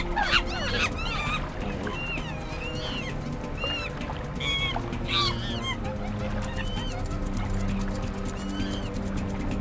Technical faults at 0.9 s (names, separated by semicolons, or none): none